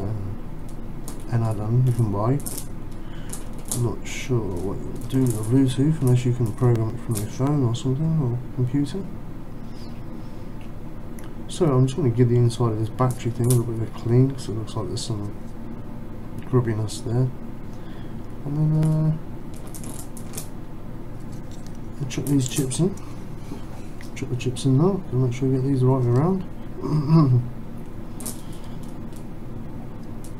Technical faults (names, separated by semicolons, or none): CD scratch ticks